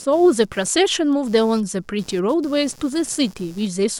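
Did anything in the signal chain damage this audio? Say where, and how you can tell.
Yes. The damage happened in the analogue wiring, at the shared ground. Computer activity noise sits under the speech for the whole clip. It is a buzzy, chirping pulse at around 150 Hz, roughly 30 dB below the speech. It does not follow the speech, so it is not from the source. Processor, graphics or mouse load changes pull current through a ground that the audio circuit also uses. That shifts the reference, and the converter records it.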